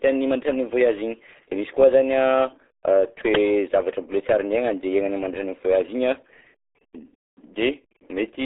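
From start to finish the speech carries the damage of the RealAudio 14.4 codec, the old RealAudio 1 dial-up format. The band is squeezed to roughly 300 Hz to 3.5 kHz, with nothing above 3.7 kHz, so sibilants and consonant detail are gone. The heavy coding damage leaves the voice muffled and gargly, with a bubbling texture typical of a very low bitrate, which fits an 8 kbit/s stream.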